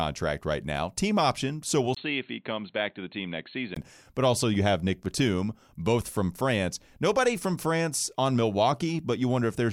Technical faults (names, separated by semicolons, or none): input switched to a poorer device